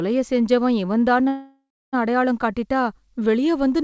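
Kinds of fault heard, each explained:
call audio freeze: After "செஞ்சவன் இவன்தான்னு", from 1.28 to 1.95 s the last sound stretches into a fading buzz or hiss and then 0.3 s of silence, likely a starved jitter buffer. Unlike a dropout, nothing is lost: the speech resumes where it stopped, 0.65 s late.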